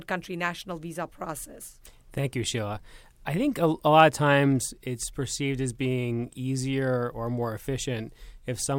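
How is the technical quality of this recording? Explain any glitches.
The speech recording is technically sound, with no glitches to explain: the signal runs continuously with no dropouts, clicks or interruptions anywhere in the clip.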